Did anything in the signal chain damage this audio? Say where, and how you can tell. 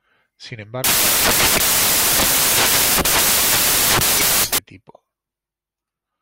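Yes. From 0.84 to 4.58 s the speech turns into loud white noise, samples built from the wrong bytes at the sample-format conversion stage. Misassembled bytes promote noisy low bits to the top, so the waveform fills to near full scale and the spectrogram shows flat broadband energy.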